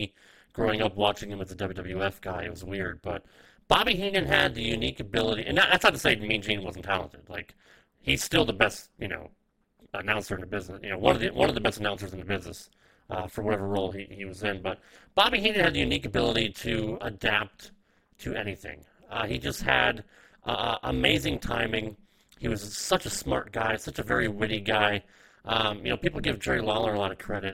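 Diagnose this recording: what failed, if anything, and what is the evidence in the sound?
Overlap-add ripple, call processing: uneven window overlap dips level about 60 dB roughly 200 times a second throughout; robotic buzz, notched waveform, striped spectrogram.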